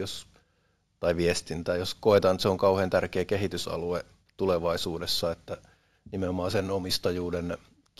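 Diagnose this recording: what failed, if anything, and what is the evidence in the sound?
Imaging from linear upsampling at the sample-rate conversion stage runs throughout this speech. The top is dulled, and a faint mirrored copy of the spectrum, roughly 25 dB down, fills 8 kHz to 16 kHz as a steady metallic sheen on sibilants. That points to 16 kHz audio raised to 48 kHz by straight-line interpolation. Unlike codec artefacts, the sheen is constant rather than swirling.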